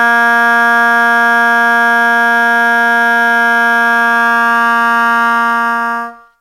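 From start to finish the music carries the grit of crude rate conversion, consistent with a 48 kHz to 44.1 kHz change made by simply picking the nearest sample. The dropped samples repeat in a fixed cycle, creating inharmonic fizz roughly 25 dB below the music that swells with loud, bright passages. A spectrogram shows faint aliased lines and a grassy haze mirroring the real partials at unrelated frequencies, while the waveform carries tiny stair-step irregularities.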